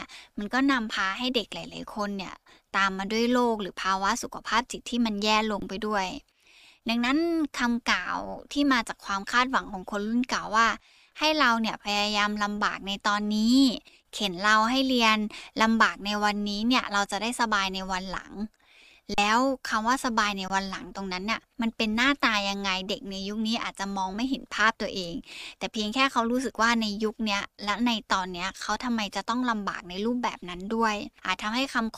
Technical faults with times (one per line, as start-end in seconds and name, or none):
5.60-5.62 underrun with held sample
19.14-19.18 underrun with held sample
20.48 underrun with held sample